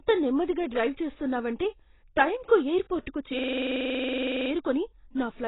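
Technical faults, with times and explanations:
throughout, AAC compression: Dull, smeared sound with nothing above 3.9 kHz and heavy codec damage. The likely cause is AAC-LC coding at a low bitrate, around 16 kbps, which lowers the cut-off and leaves spectral holes or substitute noise in the coarsely quantised bands.
3.39–4.51 s, system hang loop: A 46 ms fragment repeats exactly about 24 times, a rapid mechanical stutter at 21.5 Hz. This fits a 2048-sample buffer that the sound hardware kept cycling while the system froze, with little or no audio lost.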